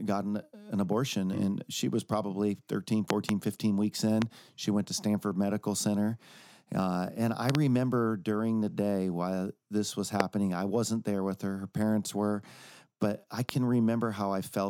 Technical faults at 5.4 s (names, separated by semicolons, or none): none